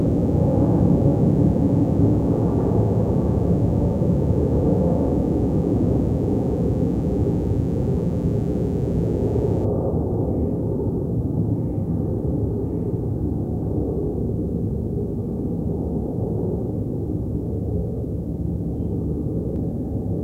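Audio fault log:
0.00–9.65 s mains buzz: spikes twice per 60 Hz cycle give a steady, raspy buzz, roughly 25 dB under the sound, seen as stacked harmonic lines reaching kilohertz.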